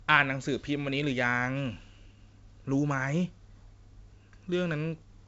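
No technical faults can be heard in the speech. It passes through G.722 wideband telephone coding with no more than faint coding damage, and the band stops at about 7.7 kHz, which fits the full 64 kbit/s mode.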